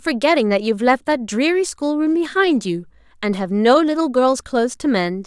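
Nothing in the recording stood out as a technical fault on listening.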